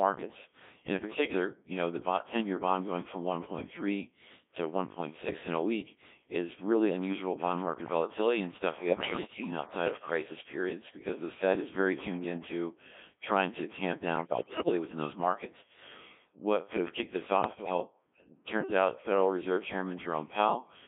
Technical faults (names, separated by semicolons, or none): Codec 2 vocoder; bit errors on digital voice radio